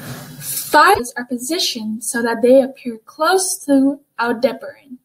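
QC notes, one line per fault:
0.90–1.00 s, damaged data in a compressed stream: brief glitch just before "are positioned so that", as corrupted frames throw the decoder out of sync until it finds the next valid header.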